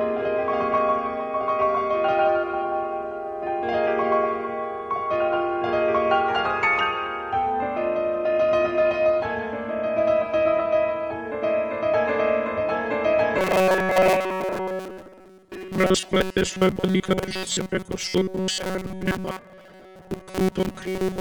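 Audio most likely began arriving too rarely for playback from 13.38 s to the end at 21.21 s, so the software kept filling gaps by replaying a very short buffer, about 5.3 ms long, while the real material was skipped. Roughly two-thirds or more of that stretch is these repeats. This robotic sound from repeated short buffers locks the audio onto a rigid 188 Hz metallic buzz that only loosely tracks the underlying sound.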